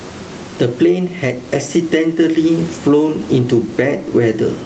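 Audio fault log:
Throughout: gain pumping. The level swings by around 15 dB. Loud and soft syllables sit close together and sound squashed. The likely cause is input gain set far too high, with a fast limiter pulling it down on each peak. A noise gate would cut the background to silence, but here the room background remains.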